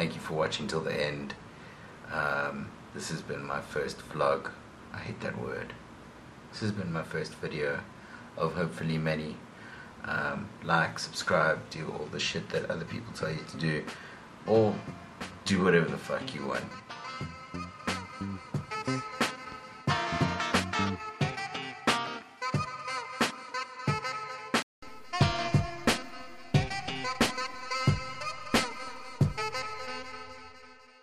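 From the start to 24.82 s the audio has nothing above 12.4 kHz, sits about 5 dB lower and carries its own noise floor roughly 50 dB down; a 200 ms silence then precedes fuller sound. The likely cause is an input switched to a poorer device.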